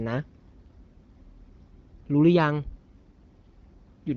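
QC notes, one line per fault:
Nothing stood out on listening to this speech.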